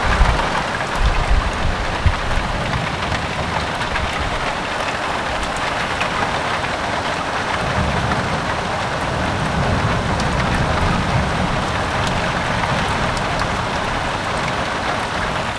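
Nothing is technically wrong with this clip of sounds.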